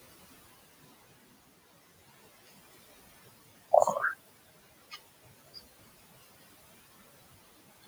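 Across the whole clip the background noise dips away in the gaps and swells back under the speech. These are noise suppressor artifacts: bands judged as steady noise are pulled down frame by frame, by about 15 dB here, acting on room noise roughly 17 dB below the speech.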